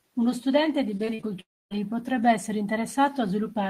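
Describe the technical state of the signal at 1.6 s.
At 1.6 s the speech is in a gap from 1.41 to 1.73 s. The last sound fades to silence. This is likely a long network dropout; it resumes at "potrebbe essere".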